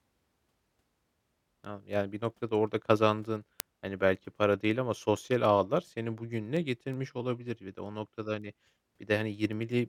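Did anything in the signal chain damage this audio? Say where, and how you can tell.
Yes: word clock ticks run through the speech from 0.27 to 9.71 s as steady clicks roughly every fifth of a second. At the digital interface, the receiving clock is not locked to the sender's and drifts around 100 ppm, dropping or repeating one sample per tick.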